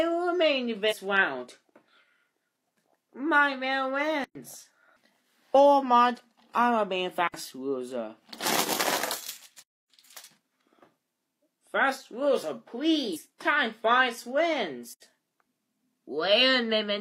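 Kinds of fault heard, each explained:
Compressed frames skipped: Around 0.88 s and 13.12 s the sound jumps ahead by about two 42.7 ms frames, roughly a tenth of a second lost. No gap opens.
Block of digital silence: At 4.24, 7.28, 9.62 and 14.93 s the sound drops to silence for 110, 63, 275 and 85 ms. Unlike a skipped frame, each one leaves a hole in the audio. The last one fits a 4096-sample buffer that was not filled in time.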